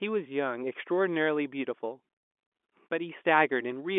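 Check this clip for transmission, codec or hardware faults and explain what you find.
No transmission, codec or hardware faults.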